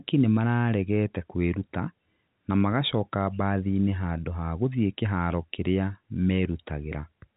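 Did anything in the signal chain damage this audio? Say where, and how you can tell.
No, nothing in the chain damaged this speech.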